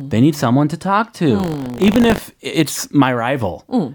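Buffer tearing, 1.38 to 2.19 s: writer and reader cross inside each 20 ms period, splicing in slivers of older audio and producing a 50 Hz robotic buzz.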